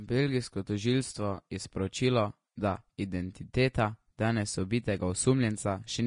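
From start to finish the speech carries plainly audible Vorbis compression damage, likely from low-bitrate encoding. Nothing remains above 10.6 kHz, so the top octave is simply gone. Below that cut-off the treble has been quantised so coarsely that fine detail is replaced by noise of similar energy, giving sibilants and breath a hissy, grainy texture, roughening tonal parts and softening consonant attacks. The degree of damage fits a rate somewhere around 35 kbps.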